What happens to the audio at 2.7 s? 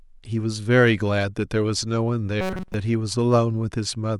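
Robotic sound from repeated short buffers runs from 2.41 to 2.74 s. The speech collapses into a rigid metallic buzz at 188 Hz throughout, which fits a 5.3 ms chunk being looped, likely because fresh audio stopped arriving and the last buffer was replayed instead.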